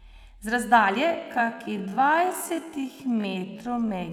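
From 1.04 s to the end, the speech slows to about half pace (0.51x) with its pitch unchanged, dragging: a time-stretched section, likely from software repeating short grains to lengthen it. Spectrogram harmonics stay level but stretch horizontally.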